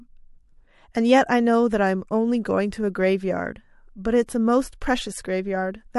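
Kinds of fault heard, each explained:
Pre-echo: a transform codec spreads quantisation noise across a whole block, so a sharp speech onset late in the block drags noise sized for the loud part into the quiet moment before it. Here a hiss rises about 17 dB above the background for 21 ms ahead of the attack at 4.26 to 4.29 s, softening it. The spread fits a transform window of about 36 ms, with no switch to shorter blocks for the transient.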